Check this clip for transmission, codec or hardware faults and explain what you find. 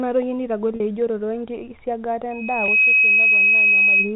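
Two faults are present: packet loss with pitch repetition at two points, and a loudspeaker feedback squeal over the final stretch. The narrowband telephone-style coding, which fits G.711 A-law, adds nothing beyond its normal 4 kHz ceiling.

Packet loss with pitch repetition occurs at 0.76 to 0.80 s (40 ms, consistent with two 20 ms packets) and at 2.66 to 2.68 s (20 ms). The receiver fills each gap by looping the last pitch cycle, so the sound briefly hangs on a held, slightly buzzy tone before speech resumes.

The loudspeaker feedback squeal runs from 2.31 to 4.14 s. The microphone is picking up its own loudspeaker, and at 2.5 kHz the loop gain exceeds unity. A single tone builds over about half a second to roughly 10 dB above the speech and persists to the end.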